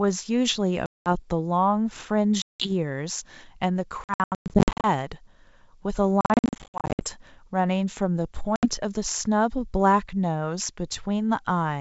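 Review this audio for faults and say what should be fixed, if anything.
Packet loss on the ADPCM call dropped audio at 0.86–1.15 s, 2.42–2.71 s, 4.04–4.88 s, 6.21–7.05 s and 8.56–8.66 s. The two middle spans lose about 500 ms in scattered runs of up to 110 ms. Silence fills each hard-edged gap, and the receiving decoder's predictor and step size drift from the sender's, so speech returns with brief, slight distortion.

Adding packet loss concealment with decoder state resynchronisation, or forward error correction on the link, would prevent this.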